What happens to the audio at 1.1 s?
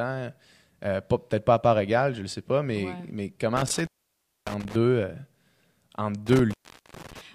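Nothing goes wrong at 1.1 s; the speech passes through that moment intact, with no dropout, click or distortion to be heard.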